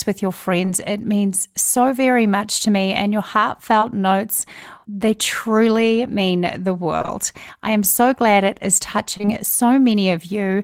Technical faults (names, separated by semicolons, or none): short concealed packet loss